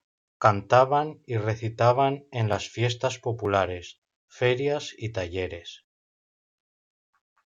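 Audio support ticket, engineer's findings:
No faults found on listening; signal path and playback chain working as expected, nothing to action.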